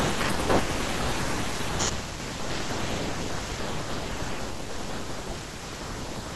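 From 5.18 to 6.17 s the speech breaks into processor overload crackle: the processor keeps missing its deadlines for very short buffers of a few milliseconds, and dozens of them are simply skipped. Each skip removes a sliver of audio and butts the edges together, so the sound tears into a gritty, rapid crackle until the load eases. On a waveform the stretch shows many small hard discontinuities. A spectrogram shows thin vertical broadband streaks across that second.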